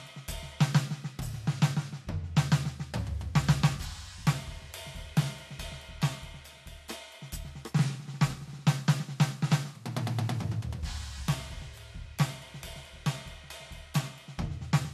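No technical faults are audible.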